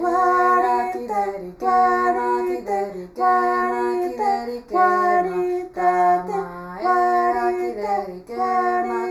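Everyday sounds with channel delay (comb filtering) throughout the clip. One channel arrives a fraction of a millisecond late, roughly 0.15 ms, which points to an offset of only a few samples. When the two channels are summed to mono, the shared content cancels at regularly spaced frequencies. The first deep notch falls around 3 kHz, with further notches repeating higher up. The result is a hollow, phasey coloration with fixed dips in the upper midrange and treble.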